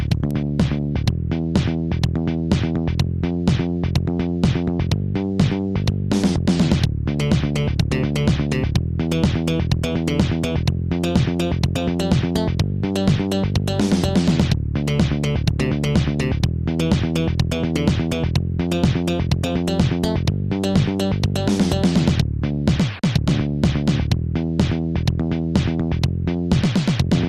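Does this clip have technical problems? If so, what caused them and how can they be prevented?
Yes, there's a single bit error spike at 0.31 s: one flipped bit in a lone sample makes a sharp broadband tick. Using error-checked memory and links would prevent it.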